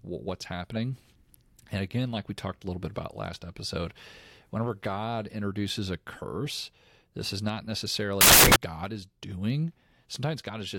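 From 8.21 to 8.56 s, right after "curse this is not", samples built from the wrong bytes scramble the speech into loud, harsh broadband noise, unlike clipping's harsh but still recognisable distortion.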